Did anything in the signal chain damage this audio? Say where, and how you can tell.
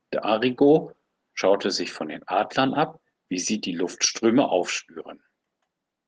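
No, nothing in the signal chain stood out as damaging this speech on listening.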